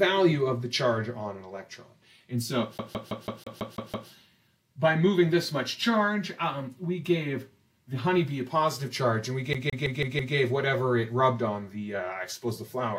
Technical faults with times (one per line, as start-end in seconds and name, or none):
2.78-4.10 CD stuck on one turn
9.53-10.36 CD stuck on one turn